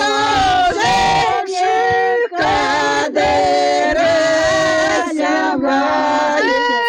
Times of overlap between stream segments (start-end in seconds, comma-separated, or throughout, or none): none